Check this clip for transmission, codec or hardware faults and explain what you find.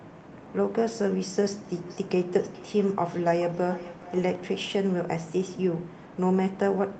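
One transmission fault stands out, a feedback echo between two devices.

Feedback echo between two devices, from 1.87 s to 4.74 s: two devices in the same room are on the same call, and one plays back what the other's microphone sent. That microphone picks the sound up again, and each echo canceller removes only its own device's playback. The speech returns at a steady interval of roughly 0.4 s, thinner and more ringing with each pass, peaking at about 18 dB below the direct speech.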